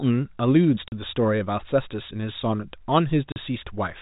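At 0.88 s and again at 3.32 s the speech drops into dead silence for 40 ms: packet loss filled with silence. Two consecutive packets went missing and the receiver played silence in their place, and a 40 ms hole fits two 20 ms packets. Concealment would smear or repeat the preceding sound rather than leave a hard gap. The surrounding audio keeps the 4 kHz ceiling of G.711 telephone coding.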